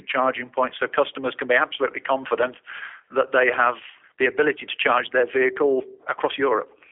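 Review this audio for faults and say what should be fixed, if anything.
G.729 codec damage is plainly audible throughout the speech. The band is limited to a telephone line of 300 Hz to 3.4 kHz, with nothing above 3.6 kHz. The voice has a rough, synthetic texture because each 10 ms frame is rebuilt from a vocal tract filter, a pitch predictor and a few pulses. That fits an 8 kbit/s G.729A stream. To prevent it, record or transmit over a wideband path or codec instead of narrowband G.729.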